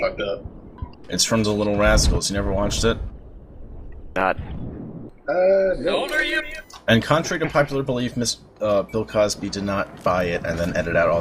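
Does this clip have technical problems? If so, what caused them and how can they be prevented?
Yes, there are two CD skips, at 0.77 s and again at 5.09 s. Each one is a tiny tick where the player mutes for just a few milliseconds, and then the sound picks up from a different spot. That's the laser getting knocked off its track, or tripping over a flaw in the disc, and landing on another turn of the spiral. To prevent it, clean or replace the disc and keep the player steady and isolated from bumps while ripping or playing back.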